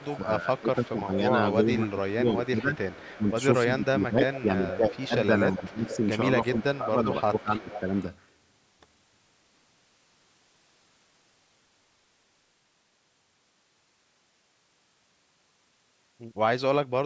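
From 0.0 to 7.94 s the speech is suppressed in double talk. While both sides were talking, the echo canceller was likely unable to separate the talker from loudspeaker echo, so it turned the speech down. It drops by about 15 dB at its deepest, for roughly five seconds in total, and sounds dipped and broken up.

Overlapping this is echo leak. The echo canceller on the loudspeaker side likely failed to remove all of what its microphone picked up, and sent back a copy of the voice delayed by 300 ms. That copy is faint, about 25 dB below the speech, at 0.17 to 0.93 s. It is louder, about 15 dB down, at 1.52 to 5.07 s, 5.88 to 6.09 s, 6.74 to 7.14 s and 7.67 to 8.05 s.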